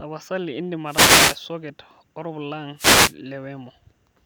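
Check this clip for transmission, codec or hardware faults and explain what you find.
Two wireless microphone noise hits occur, at 0.85 to 1.41 s and 2.76 to 3.14 s. The speech gives way to a brief swish of static. The microphone's radio signal fades, and receiver noise surges over the speech.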